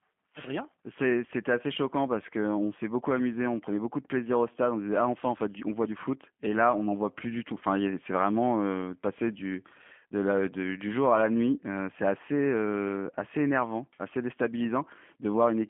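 The whole recording has passed through a G.729 codec, which rebuilds speech from a vocal tract model and sparse pulses at a rate that fits 8 kbit/s. The band stops near 3.5 kHz, and the speech sounds plainly rough, buzzy and synthetic throughout.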